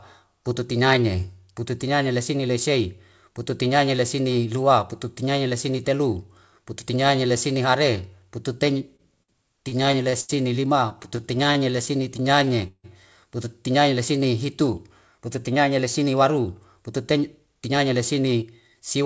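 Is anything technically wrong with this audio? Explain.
Yes. The speech has three kinds of timing fault, all of the kind a call's jitter buffer produces, on top of a G.722 call path whose 64 kbps coding leaves nothing above 8 kHz.

Two short stalls from a late packet occur at 8.96–9.02 s and 9.23–9.31 s. Each time a packet was late, the buffer ran dry and the receiver held the last sound for 30 ms, then 55 ms, before resuming where it left off. Nothing is lost; a sound just lingers with a faint buzz. Unlike the stutter, each stall is a single isolated hold.

Repeated stalls (stutter) run from 9.69 to 10.32 s, with five gaps (157 ms filled, longest 82 ms), and from 10.81 to 12.87 s, with seventeen gaps (339 ms filled, longest 159 ms), ending just before "pututinaine lesine hitu". Packets kept arriving late, so the buffer emptied again and again and each wait was bridged with stretched, sometimes fading sound. 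The speech drags and catches, concealed in about a quarter and a sixth of each span.

A jitter buffer speed-up follows "pututinaine lesine hitu", from 14.89 to 19.02 s. With extra audio queued, the receiver trimmed many pitch-period-sized pieces, about a third of a second in total, so the speech runs at 107% speed. The pitch stays the same, which sets it apart from a sped-up playback. It sounds hurried rather than halting.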